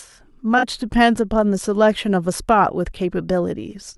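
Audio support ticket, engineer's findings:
AAC frame loss with concealment, 0.58 to 0.64 s: brief smeared, phasey patch in the speech, about 43 ms, consistent with two lost AAC frames. The decoder fills in from the last good spectrum with scrambled signs or interpolated energy. Unlike a dropout, there is no silent gap.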